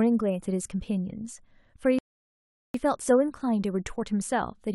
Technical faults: rebuffering stall

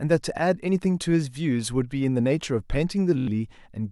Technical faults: Bluetooth stutter

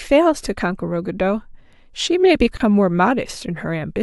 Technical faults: gap at a join of encoded pieces

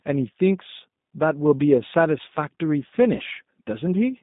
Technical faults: G.729 codec; VoIP packet loss concealed by the speech codec

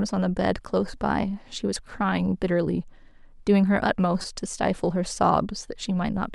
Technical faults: corrupt frame decoded

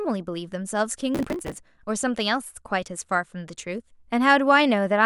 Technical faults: processor overload crackle

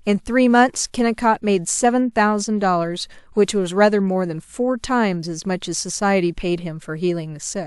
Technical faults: none

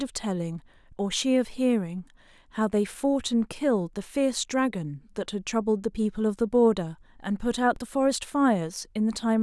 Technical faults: DC step

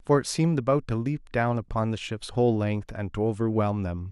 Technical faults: MP2 compression

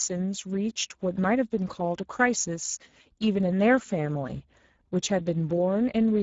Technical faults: Speex codec

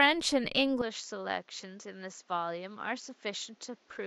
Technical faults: input switched to a poorer device

